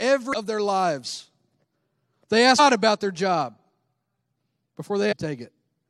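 Damaged data in a compressed stream hits this speech three times: at 0.33 s, just before "of their lives"; at 2.58 s, just before "about their job"; and from 5.11 to 5.13 s. Each time the decoder misreads the broken frames and resynchronises, leaving a brief glitch of 14 to 22 ms.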